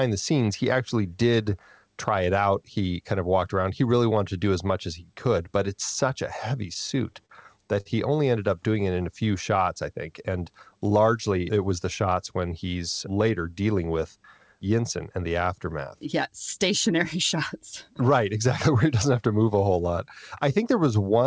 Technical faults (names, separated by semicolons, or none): repeated stalls (stutter); short stall from a late packet